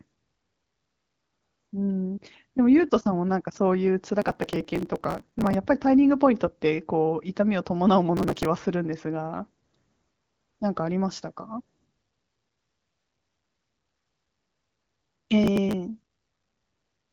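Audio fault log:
4.22–5.54 s, 8.17–8.45 s, 15.43–15.74 s: processor overload crackle. The processor keeps missing its deadlines for very short buffers, each lasting about a millisecond and a half. Every missed buffer is skipped, leaving a hard-edged gap, and many such gaps in rapid succession produce gritty crackle over the speech.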